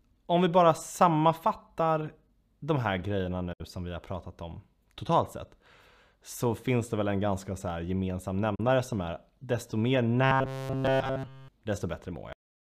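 At 3.53 to 3.61 s and 8.55 to 8.60 s, a digital broadcast dropout mutes the speech after a quick 8 ms fade, losing 64 ms and then 32 ms, which fits two lost frames and then one. Both show as blank vertical gaps.

From 10.24 to 11.48 s the speech turns into robotic sound from repeated short buffers, a rigid metallic 133 Hz buzz throughout. It is likely caused by a roughly 7.5 ms buffer looping. On a spectrogram it shows as evenly spaced horizontal harmonics.

At 12.33 s there is a cut-off end. The speech stops mid-sound into digital silence with no decay, so the waveform shows a flat line.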